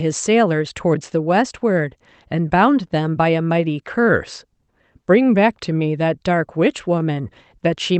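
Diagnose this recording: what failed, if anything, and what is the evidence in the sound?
Clock drift between sender and receiver is the root failure, at the buffer stage of this Opus call. The sender's clock runs about 1.5 percent slow. The jitter buffer keeps draining, so the receiver must keep padding the speech to stay in step.

Repeated timing corrections follow from that drift. From 0.03 to 1.99 s, the speech plays at 98 percent speed, adding about 40 ms. From 4.05 to 7.57 s, it slows again, adding about 70 ms. If heard at all, they sound like slight hiccups or a dragging tempo.

A short stall from a late packet occurs from 2.88 to 2.93 s. The buffer ran empty, and the receiver held the last sound for 21 ms until the packet arrived. Nothing is missing. The delay grows by 21 ms, and a brief buzz or dip can be heard.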